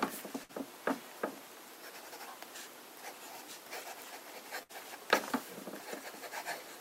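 A burst of packet loss hits twice, at 0.43 to 0.52 s and 4.63 to 4.72 s: packets were lost or arrived too late, so the receiver stretched and faded the last sound for about 55 and 62 ms before audio resumes with roughly 60 ms missing.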